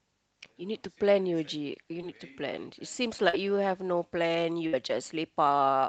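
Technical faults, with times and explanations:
2.01–2.05 s and 3.29–3.35 s: short concealed packet loss. At each point a stretch of the call arrived too late for the decoder, about 20 ms the first time and 40 ms the second. The receiver patched each hole by extending the preceding sound, for about 12 ms and 44 ms, then crossfaded back into the real signal. The patch is audible as a brief smear or wobble.
4.67–4.75 s: burst of packet loss. About 60 ms of consecutive audio failed to arrive in time. The decoder bridged the gap with roughly 58 ms of extrapolated sound, fading it as the gap went on. This produces a short held buzz or decaying hiss in place of the real content. The audio then resumes further along, so whatever fell in that window is absent. The call codec limits the band to about 8 kHz.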